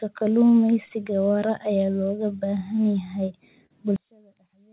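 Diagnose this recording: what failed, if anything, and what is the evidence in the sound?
Clock drift between sender and receiver runs through the whole clip, a network and buffer-stage fault. The sender's clock runs slow, by roughly 3 percent against the receiver, so the jitter buffer keeps draining instead of holding a steady depth. The receiver has to invent material to stay in step, which shows up as the stretching and the stall described below, with small timing hiccups rather than one clean error.

Repeated timing corrections run from 0.23 s to 2.77 s, at the buffer stage. Playback of this stretch is slowed to 98 percent speed, adding something like 70 ms in total. The receiver is repeatedly padding short pieces to keep pace with the slow sender. Each edit is small, uneven in spacing, and always in the same direction.

A short stall from a late packet sits at 3.66 to 3.72 s, a network fault handled by the jitter buffer. 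A packet arrived late, the buffer ran empty, and the receiver held the last sound for 39 ms until it turned up, then resumed from the same point. Nothing is lost, but the sound briefly hangs, and delay grows by that 39 ms.

One channel inverted affects 3.96 s to the end at 4.72 s, most likely in analogue wiring or channel handling. Here the mono-summed level drops by about 34 dB, leaving only a faint residue, because content common to both channels cancels when one has reversed polarity. The G.711 A-law call path carries the audio with nothing above 4 kHz, consistent with its normal narrowband behaviour.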